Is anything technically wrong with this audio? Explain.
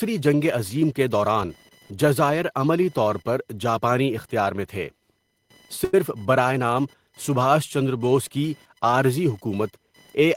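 Yes, two faults can be heard in this speech.

Computer activity noise runs through the whole clip as a faint, scratchy buzz pulsing at around 1 kHz, well below the speech at roughly 35 dB down. It rises and falls with the computer's workload, not with what is being said. Load swings in the processor, graphics card or mouse shift the ground shared with the audio circuit, and that wandering ground leaks into the signal.

A short stall from a late packet occurs at 5.84 to 5.94 s. The sound there is held on for about 90 ms, a brief smeared sustain with a slight buzzy edge, before the speech picks up again. Nothing is lost. A packet arrived late and the jitter buffer emptied, so the receiver stretched the last bit of audio until the packet arrived, then resumed from the same point. Everything after it is delayed by that 89 ms.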